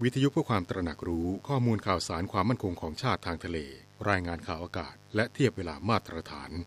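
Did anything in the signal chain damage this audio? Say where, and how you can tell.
Yes: mains buzz throughout the speech, a steady raspy 50 Hz harmonic series about 25 dB down, from switching spikes from a dimmer, rectifier or missing shield entering the analogue wiring.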